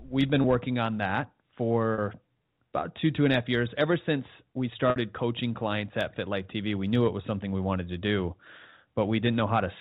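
Three brief glitches interrupt the speech, at 0.42 s, 1.94 s and 4.90 s. The first two sound like a momentary held, slightly buzzy tone, while the third fades into silence before the speech returns with a short cross-fade, growing longer each time at about 20, 40 and 60 ms. This is packet loss with pitch repetition. The receiver filled each gap by looping the last pitch period and fading it out, and the lengths fit one, two and three lost 20 ms packets. The audio carries the 4 kHz ceiling of G.711 telephone coding.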